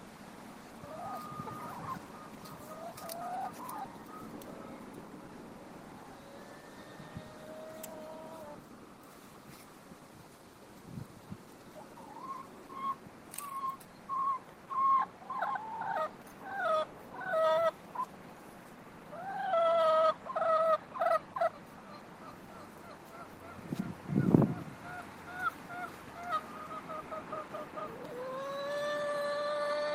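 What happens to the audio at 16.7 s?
Nothing goes wrong at 16.7 s; the audio plays through that moment intact, with no dropout, click or distortion.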